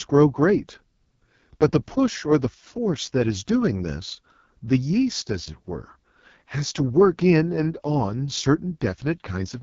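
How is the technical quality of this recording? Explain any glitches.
Technical quality is poor, with heavy AMR wideband (HD Voice) codec damage throughout the speech. Content stops around 7.2 kHz, and the harsh, raspy texture fits AMR-WB at its lowest rate, near 6.6 kbit/s, where the coarse vocal-tract model and noise-filled top band roughen every syllable.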